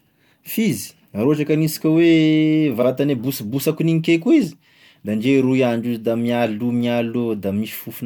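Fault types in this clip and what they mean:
Repeated frames: a short run of compressed frames was decoded twice, so the same slice of speech plays again back to back. Here a 46.4 ms block starting at 2.81 s and ending at 2.86 s is heard once more immediately after itself, which fits a run of two frames, producing a brief stutter in the speech. The extra play lengthens the clip by 46.4 ms and shifts everything after it later by that amount.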